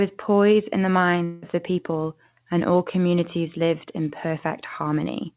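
Speech with a long network dropout, likely, from 1.24 to 1.44 s: about 0.18 s of sound is lost and replaced by a fading buzz, seen as smeared, flattened waveform and blurred harmonics, within narrowband content ending at 4 kHz.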